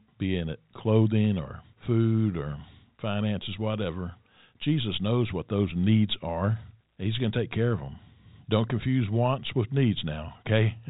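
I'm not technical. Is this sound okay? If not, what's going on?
Yes, nothing is wrong with this speech recording.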